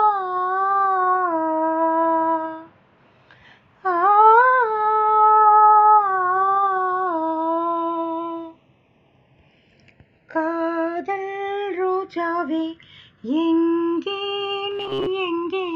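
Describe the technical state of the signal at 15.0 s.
At 15.0 s the sound has a rigid, metallic buzz pinned at 134 Hz, running from 14.71 to 15.08 s. This is robotic sound from repeated short buffers, likely caused by a period of about 7.5 ms being replayed in place of most of the real audio. Unlike codec warble, the pitch is fixed rather than wandering.

Underneath, the channels are drifting apart throughout. A clock error of roughly 70 ppm lets the inter-channel delay creep toward under a millisecond. In mono the comb notches sweep slowly, which separates this slow flanging from static comb filtering.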